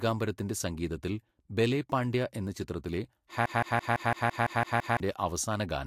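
At 3.46 s the speech locks into a broken-record loop that runs until 5.0 s: a 168 ms fragment plays nine times back to back, so the sound stutters mechanically, and whatever should have followed in that stretch is gone. The likely cause is a stalled player, encoder or stream resending the last piece it held. On a waveform or spectrogram this shows as an identical block tiled at a steady 168 ms spacing.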